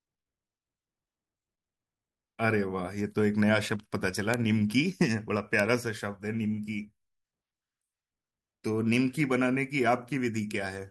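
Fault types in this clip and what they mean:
Bit error spike: a single flipped bit throws one or two samples to a value about -8 dBFS and straight back, heard as a sharp broadband tick in the speech at 4.34 s and 5.60 s; unlike a dropout or digital clipping, nothing is lost and the surrounding signal is untouched.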